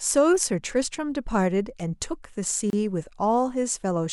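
At 2.70 s the speech briefly drops out for about 29 ms, then picks up right where it stopped. It's a gap at a join of encoded pieces: separately encoded chunks were spliced without trimming the encoder's leading delay and final-frame padding, leaving a short silence with smeared edges.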